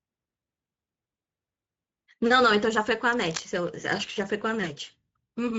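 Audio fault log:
throughout Speex codec: plainly audible CELP coding damage at about 16.8 kbps, starved excitation making speech hoarse and noisy, nothing above 7.7 kHz.
3.12–3.47 s cable scratch noise: dense, uneven burst of scratching about 10 dB below the speech, likely from a worn cable or connector being moved.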